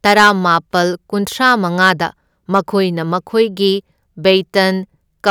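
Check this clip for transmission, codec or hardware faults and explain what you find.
Hard clipping, twice. At 1.44–1.90 s and 2.55–2.59 s, speech peaks overshoot a stage by about 4 and 3 dB, get flattened, and crackle with harsh upper harmonics.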